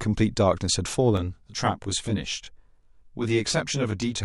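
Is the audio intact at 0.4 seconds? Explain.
Yes, the audio is intact at 0.4 seconds, with no audible fault at that moment.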